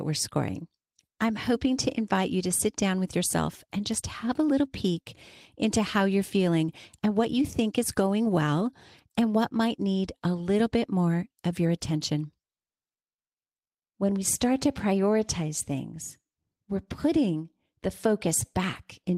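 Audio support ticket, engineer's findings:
No faults found on listening to the speech recording. Nothing to escalate at this stage.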